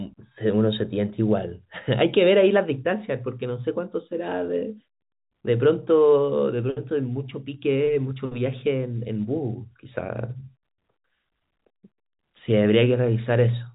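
No faults heard; the speech carries the narrow G.711 telephone coding as designed, with nothing above about 3.8 kHz and only the faint level-following quantisation hiss of that format.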